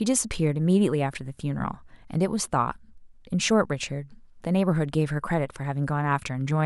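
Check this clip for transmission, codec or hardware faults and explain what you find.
No transmission, codec or hardware faults.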